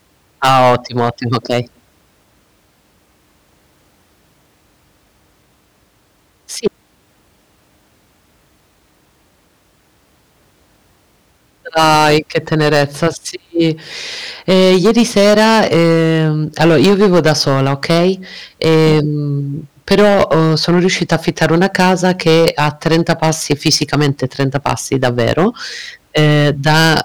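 Harsh fuzz coats the loud speech at 0.43–1.60, 11.76–13.08, 14.49–18.10, 19.88–25.47 and 26.17–27.01 s, with lighter crackle at 6.66, 13.60–13.69 and 18.62–19.00 s. This is hard clipping. Peaks overdriven by about 3 to 15 dB are cut flat, adding high harmonics.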